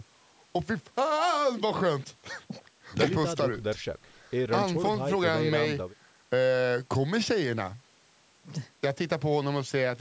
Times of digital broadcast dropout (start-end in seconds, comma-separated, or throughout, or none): none